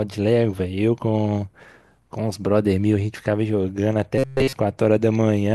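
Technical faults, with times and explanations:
4.18 to 4.53 s, robotic sound from repeated short buffers: the speech turns into a rigid metallic buzz pitched at 133 Hz that only loosely tracks the words, likely because audio arrived too seldom and a segment of about 7.5 ms was looped while essentially all the real audio was skipped.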